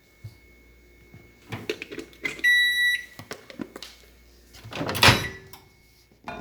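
The recording carries no audible technical faults.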